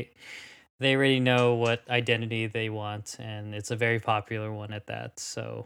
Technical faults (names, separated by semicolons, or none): none